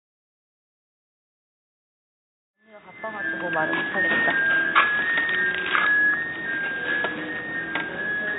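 No technical faults can be heard in the signal, which rises in a smooth, deliberate fade-in from about 2.5 s to 3.86 s before holding at its full level.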